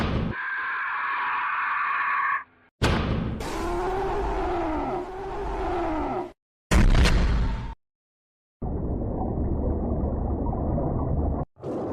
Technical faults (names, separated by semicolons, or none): skip ahead; jitter buffer speed-up